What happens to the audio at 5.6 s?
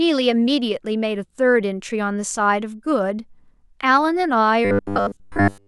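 At 5.6 s the speech has become a rigid, metallic buzz, robotic sound from repeated short buffers, running from 4.65 s to the end of the clip. The likely cause is new audio arriving too seldom, so a slice of about 10 ms is replayed over and over for most of that span while real audio is skipped. That fixed repeat imposes a steady 100 Hz buzz, unlike clean dropouts, which leave silent gaps.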